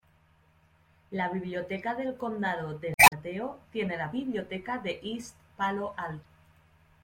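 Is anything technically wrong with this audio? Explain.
Yes. The speech has two patches of damaged data in a compressed stream. The first runs from 2.94 to 3.13 s. The second is shorter, from 6.21 to 6.25 s. In each spot, part of the encoded data is corrupt. The decoder cannot read those frames properly and loses its place. It then hunts for the next valid frame header. While it does, the damaged frames come out as a brief chirp, squawk, click or short hole in place of clean speech.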